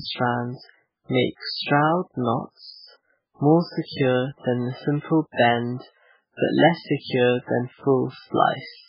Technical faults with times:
0.00-8.89 MP3 compression

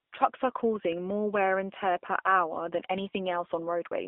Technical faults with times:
0.00-4.07 AMR narrowband mobile codec

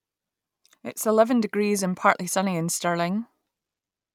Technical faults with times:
none

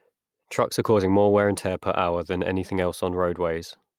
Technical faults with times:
none

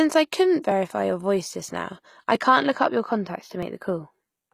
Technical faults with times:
0.00-4.54 channels drifting apart
0.00-4.54 HE-AAC compression
0.71 dropped buffer (overrun)
2.35 dropped buffer (overrun)
3.63 dropped buffer (overrun)

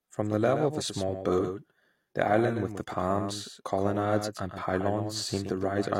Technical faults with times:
0.00-6.00 doubled audio track

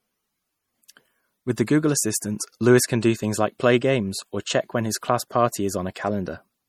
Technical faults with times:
0.00-6.68 low-bitrate audio saved at a high bitrate

